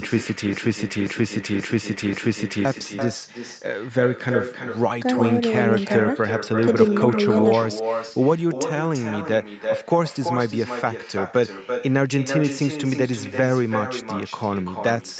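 From the first moment to the end, every phrase is trailed by a quieter, thinner copy about a third of a second later, roughly 8 dB below the direct speech. This is echo with no canceller: the far end's loudspeaker fed back into its microphone, and nothing removed it before it returned.

From 0.53 to 2.65 s, a 0.53 s fragment plays four times back to back, like a broken-record loop, and the speech that belonged there is gone. The stream or encoder likely stalled and kept resending the last piece it held.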